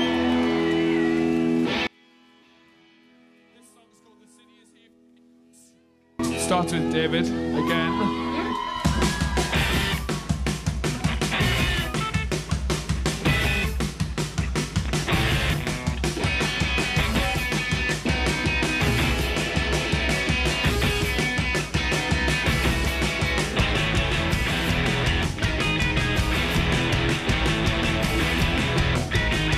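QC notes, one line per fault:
1.87–6.19 s, one channel inverted: from about 1.87 s to 6.19 s the sound drops by about 33 dB to a faint copy, then comes back at full body. That's likely one stereo channel flipped in polarity, so everything the two sides share cancels when they're folded to mono, and only the small difference between them survives as a faint ghost.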